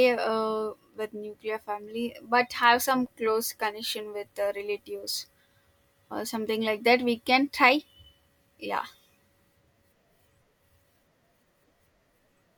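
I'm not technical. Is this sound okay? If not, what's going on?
Yes, this recording has no technical faults. The sound carries on steadily with nothing breaking into it.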